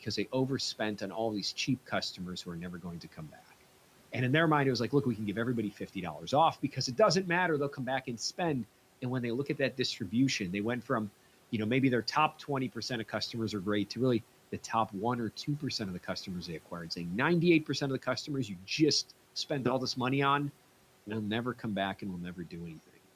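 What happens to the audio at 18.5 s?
From 18.48 to 18.68 s, the speech is cut by the noise suppressor. The suppressor mistakes part of the quiet speech for background and pulls it down with the room noise, which sits about 23 dB below the speech. In total, around a tenth of a second is affected, falling by as much as about 8 dB, so the sound there seems swallowed and faint. Unlike a dropout, it never falls to silence or leaves a hard gap.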